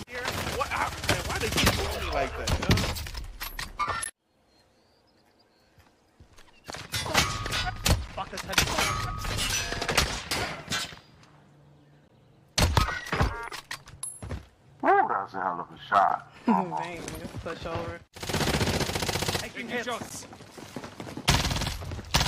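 At 4.04 s there's the first gap between stream segments, a hard-edged hole of about 16 ms where the player found the next segment's timestamps starting a little late and padded the difference with silence. It comes back every 4 s, at 8.08, 12.08, 16.09 and 20.09 s, each time 11 to 13 ms long. Nothing is actually missing. The sound just stops dead for a moment and picks up where it left off.

In between, at 13.73 s you get a small jump forward in the sound. That's a dropped buffer (overrun), most likely the capture side not reading its samples before the hardware wrote over them, so roughly 10 ms vanished and the two ends were spliced together with no silence at all. A bigger one lands at 16.36 s, just after the 16.09 s gap, skipping ahead by something like 20 ms, which fits a lost buffer or two.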